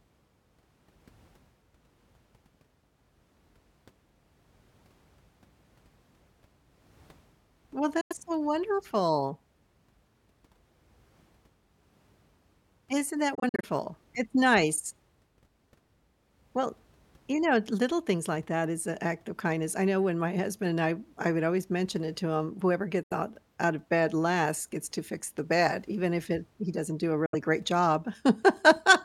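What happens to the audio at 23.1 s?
The sound cuts out for about 90 ms, from 23.03 to 23.12 s, right after "it to him whoever", and comes back at "out out of bed" with the intervening moment simply missing, as though playback had carried on in silence. This is a Bluetooth dropout, likely caused by audio packets reaching the headphones too late and being discarded, so the output held silence until valid packets resumed. The gap's length fits a few lost packets.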